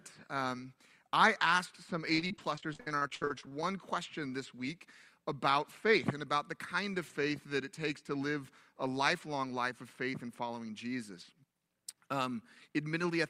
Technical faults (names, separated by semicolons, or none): repeated packet loss (robotic sound)